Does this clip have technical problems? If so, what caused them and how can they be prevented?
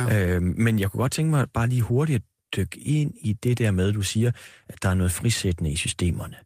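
No, nothing in this recording stands out as a technical problem, so there's nothing to trace back or guard against here.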